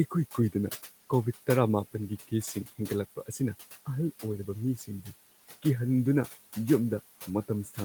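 Noise suppressor artifacts run through the whole speech clip. The suppressor cuts the room noise by about 13 dB between words, then lets it rise under them.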